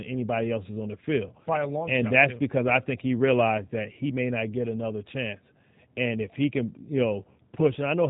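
From start to finish the speech has passed through a G.729 codec, and its texture fits the 8 kbit/s G.729A variant. Each short frame is rebuilt from a vocal tract filter, a pitch predictor and a few pulses, so nothing above 4 kHz survives, leaving the speech dull, rough and plainly synthetic.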